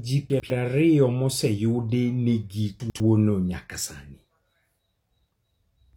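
Right near the start, between 0.3 and 0.5 s, there's a spot of chunks out of order: one 100 ms piece turned up a chunk late, so it plays after the piece that should follow it. Nothing's missing, but the swap leaves three hard joins, and you get a quick jumbled stutter just before "ario moseyudi". The same swap happens again from 2.8 to 3.0 s, right before "no nyaka sani".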